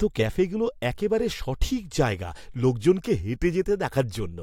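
Listening through the recording, nothing in the sound stood out as a technical problem at any point.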